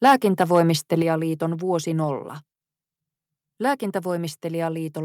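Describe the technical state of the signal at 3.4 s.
At 3.4 s the speech signal is intact, with no audible dropout, distortion, glitch or other technical fault at that point.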